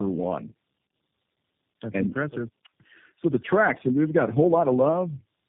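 Speech passing through tandem speech coding for its whole length: it sounds rougher, more muffled and more warbly than one narrowband codec would, which suggests about three low-rate codecs, each re-coding the last one's output, and nothing survives above 3.6 kHz.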